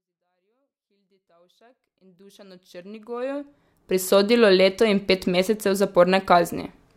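Nothing technically wrong turns up in this speech clip; the level just eases up from the very beginning and reaches full level at about 4.18 s, a deliberate, editor-style fade-in with no click or hard edge.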